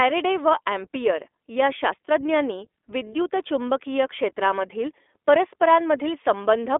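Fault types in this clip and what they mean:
iLBC codec: narrowband VoIP coding in which each frame's excitation is coded independently, consistent with 20 ms frames at 15.2 kbps. The speech sits in a 300 Hz to 3.5 kHz band, nothing above 3.8 kHz, with plainly audible synthetic roughness throughout.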